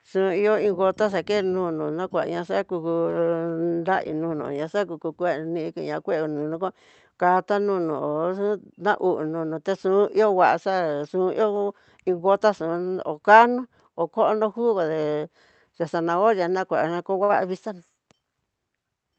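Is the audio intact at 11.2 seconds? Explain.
Yes, the speech is intact at 11.2 seconds, with no dropout, glitch or other fault at that moment.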